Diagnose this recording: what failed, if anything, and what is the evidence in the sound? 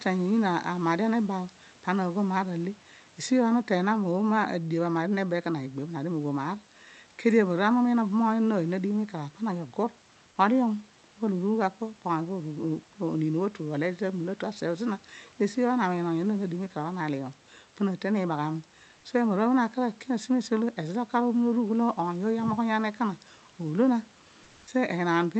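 Comfort noise in place of the background, 24.43 to 24.67 s: room noise turns steady and featureless for 240 ms, likely Opus discontinuous transmission at the codec stage.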